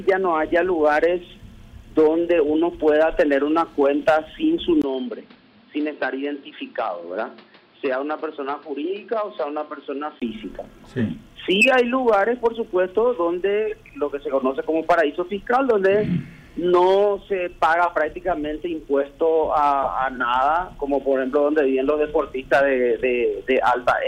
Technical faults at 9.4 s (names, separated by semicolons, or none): input switched to a poorer device